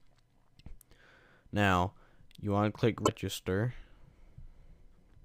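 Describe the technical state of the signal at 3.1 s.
Right around there you've got damaged data in the compressed stream, running from about 3.02 to 3.09 s. Some of the encoded frames are corrupt, so the decoder misreads them, loses sync and hunts for the next valid header, which comes out as a short chirp, squawk, click or hole.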